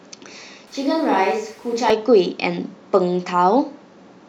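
From 0.67 to 1.90 s, a switch to a distant microphone, likely a dropped close-mic feed, makes speech abruptly roomy, hollow, about 5 dB quieter.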